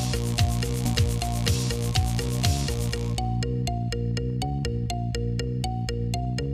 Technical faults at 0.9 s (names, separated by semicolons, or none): skip ahead